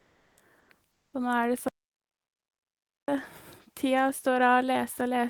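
Right at the start, from 0.01 to 0.37 s, the room sound gets swapped for comfort noise in place of the background: a flat, featureless hiss about 4 dB quieter than the real thing, which sits about 39 dB below the loudest speech. It happens again from 0.91 to 1.09 s, where the fill drops about 10 dB against a background about 51 dB down. The likely cause is discontinuous transmission in the codec, something like Opus DTX, where the sender goes quiet during pauses and the receiver makes up noise to cover the gap.

Then from 1.68 to 3.08 s there's an audio dropout to silence. For about 1.4 seconds the sound cuts to silence with no room tone at all, and whatever speech fell in that stretch is simply gone. It's most likely a lost input, such as a disconnected device, a failed link or an accidental mute, while the recorder kept writing silence.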